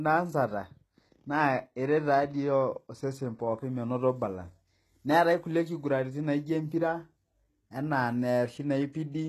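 From start to finish the speech carries HE-AAC compression damage, plainly audible, and the likely cause is HE-AAC coding at a very low rate that fits about 16 kbps. The treble is not simply dulled as with a low-pass filter or a starved MP3. It stays bright up to a hard ceiling near 12.3 kHz, but it is rebuilt from copied lower bands, so s sounds come out gritty, metallic and lispy rather than muffled.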